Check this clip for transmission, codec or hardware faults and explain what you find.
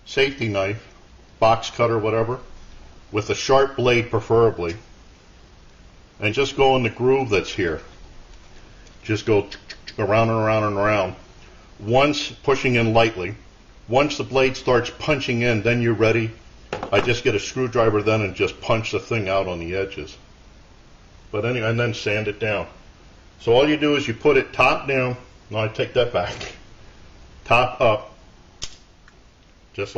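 One codec fault turns up, a spot of compressed frames skipped. Around 6.27 to 6.33 s, the sound jumps forward by roughly 150 ms, which fits about three missing or rejected 46.4 ms frames. At the join, the audio simply leaps ahead past the missing stretch.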